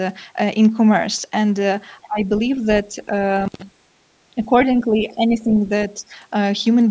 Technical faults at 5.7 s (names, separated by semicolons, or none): speech suppressed in double talk